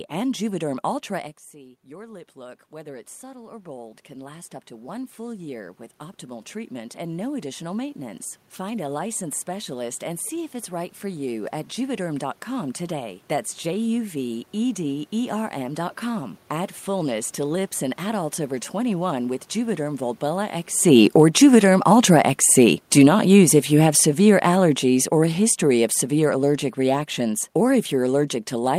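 From 1.51 to 16.45 s, automatic gain rising: after the talker moves away around one second, the input drops about 17 dB, and the gain control slowly adds about 18 dB, so speech and room noise swell together. From 20.77 s to the end, automatic gain falling: following another talker movement near 20.5 s, the control gradually pulls gain down, so the speech sinks along with its background.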